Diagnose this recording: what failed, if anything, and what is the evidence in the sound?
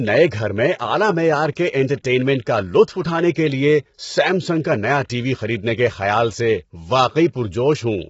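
The codec stage failed throughout. The speech sounds rough and grainy, with noise filling the gaps between harmonics and nothing above 7.7 kHz. That points to heavy low-delay AAC compression, likely AAC-ELD at a bitrate around 16 kbps, where short frames resolve pitch poorly.

The same codec also shows pre-echo from 1.52 to 1.57 s, between "گھر میں اعلی معیار" and "کے انٹرٹینمنٹ کا". A sharp onset late in a transform block had its quantisation noise spread across the whole block, so about 48 ms of hiss leads the attack and softens it.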